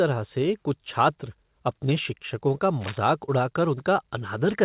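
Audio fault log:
2.81 to 2.99 s, cable scratch noise: a dense, irregular burst of crackle and rustle sits over the speech for just under 0.2 s, peaking at roughly 10 dB below the speech level. The texture is uneven, with jagged clusters rather than steady hiss. That points to a contact whose resistance is jumping around as it moves, likely a worn cable, connector or control being handled. Like the speech, the burst stops at 4 kHz, consistent with the band limit of a G.711 call path.
3.26 to 3.30 s, short concealed packet loss: about 20 ms of audio is missing and is covered by roughly 16 ms of synthesized fill before the real signal resumes. The receiver extended the preceding sound from its last pitch or spectral shape and then crossfaded back into the decoded stream. The result is a brief smeared wobble.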